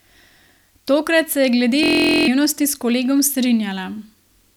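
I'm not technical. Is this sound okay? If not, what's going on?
No. From 1.83 to 2.28 s, after "se je glede", there's a system hang loop: the computer froze and replayed one 23 ms scrap 43 times a second. Unlike a dropout, it's a steady buzz rather than silence, and almost half a second of speech is lost before "s kolegom".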